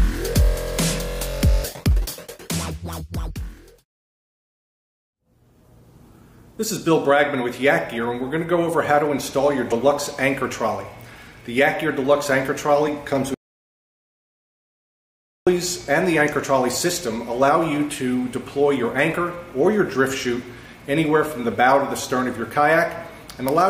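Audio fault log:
9.71 s, compressed frames skipped: a short glitch where the sound jumps forward by about 50 ms. Whole compressed frames never reached playback, missing or rejected by the decoder as damaged.
13.34 to 15.47 s, audio dropout to silence: the sound cuts off mid-flow and returns after 2.12 s of dead silence with no room tone underneath. The likely cause is a lost input, such as a disconnect, link failure or accidental mute, while recording carried on writing silence.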